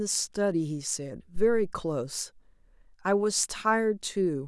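At 1.36 s there's a phantom power thump: a supply got switched on or off on the live input, and that voltage step pushed through the coupling capacitors as a deep, low thud. It peaks at about -21 dBFS, dies away over roughly 100 ms, and is gone by 1.80 s.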